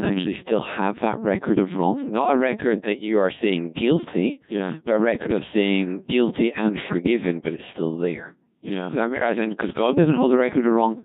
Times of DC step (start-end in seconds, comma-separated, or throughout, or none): none